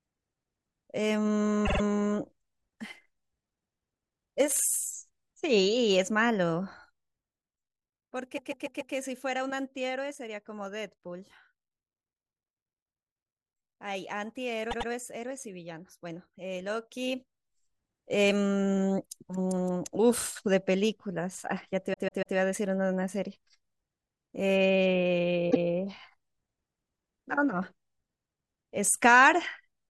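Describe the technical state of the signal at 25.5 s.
Repeated frames at 25.50–25.65 s: a 144 ms block of compressed frames plays twice, causing an audible stutter and lengthening the audio by 144 ms.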